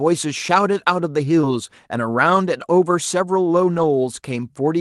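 Short concealed packet loss hits at 1.41 to 1.46 s. About 20 ms of the speech arrived too late, so the receiver covered roughly 13 ms by extending the preceding sound and then blended back, stretching timing by a few milliseconds and leaving a brief smear.

Lost packet rebuilt from error correction overlaps that spot, at 1.43 to 1.45 s, where 20 ms, consistent with a single packet, was played from the low-bitrate backup copy. It happens again at 3.73 to 3.83 s, where about 60 ms, suggesting three separate packets, was rebuilt the same way. Neither spot has a gap, but both sound rougher and grainier than the surrounding audio, which carries the ordinary Opus coding texture with content stopping near 12 kHz.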